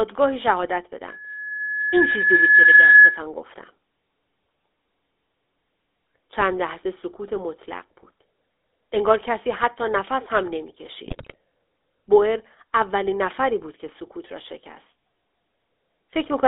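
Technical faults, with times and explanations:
throughout, GSM full-rate codec: the speech has been through the original GSM full-rate coder, which rebuilds the voice from a vocal-tract filter excited by regularly spaced pulses that keep only every third sample of the excitation, so plainly audible buzzy, gravelly roughness sits on every syllable. The sound is confined to a telephone band of roughly 300 Hz to 3.6 kHz, with nothing above 4 kHz, which fits the 13 kbps full-rate mode.
1.08 to 3.22 s, loudspeaker feedback squeal: a single tone at 1.7 kHz swells over about one and a half seconds until it stands about 10 dB above the speech, then stops at 3.22 s. A microphone was picking up the loudspeaker it fed, and at that one frequency the loop gain exceeded one, so the tone fed on itself.
11.06 to 11.35 s, GSM bit errors: for about 0.3 s the speech breaks into squawks, pops and gargling. 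Corrupted bits from a weak radio link reached the decoder, and wrong filter, pitch and gain values bent the spectrum and threw the level around frame after frame, with a bit error rate of about 3 percent across a stretch that fits fourteen 20 ms frames.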